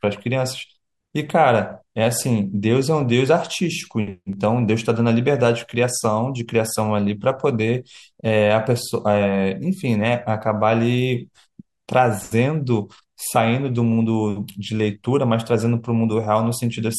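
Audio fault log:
Nothing in this speech recording stands out as a problem, so there's nothing to log here.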